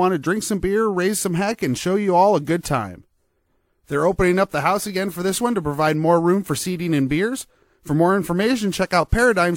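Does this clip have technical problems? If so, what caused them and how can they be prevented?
No, nothing in this speech stood out as a technical problem on listening, so there is nothing here that calls for a cause or a preventive fix.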